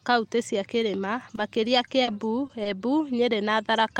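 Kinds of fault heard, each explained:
Scattered short gaps: between 0.77 and 2.71 s the speech picks up about five brief holes where packets went missing or arrived too late, and the receiver bridged each one by carrying the preceding sound forward. The longest gap is only around 40 ms, so what comes through is a handful of small ticks and smeared hiccups. This sets it apart from a single long dropout, which would cut out audibly or stretch into an obvious drone.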